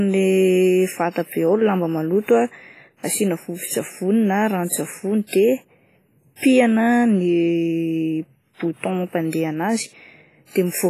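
From start to finish the speech carries a ringing, washy quality with hiss that swells and fades alongside the voice, and nothing survives above 15.4 kHz. This points to heavy WMA compression, likely at a low bitrate near 24 kbps. On a spectrogram, a hard ceiling and patchy, zeroed gaps appear.

At 5.27 to 5.33 s a pre-echo appears. Codec noise spread over a whole transform block leaks about 59 ms ahead of a sharp attack, giving a short hiss before it and a softened onset, visible as a smeared haze preceding the transient in the waveform.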